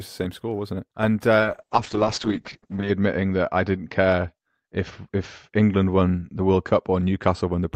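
From 1.4 s to the end there's a call bitrate drop: the encoder starves, the top end drops from 20 kHz to 8 kHz, and speech turns rough and muffled, consistent with roughly 7 kbps.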